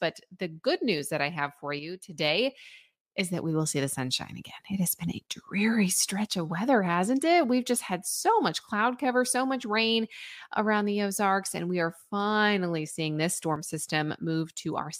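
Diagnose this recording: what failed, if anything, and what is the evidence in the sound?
Speech drops about 6 dB at 1.79–2.18 s, after "that I have for", and 13.56–13.70 s. One channel drops out, likely a loose analogue connection.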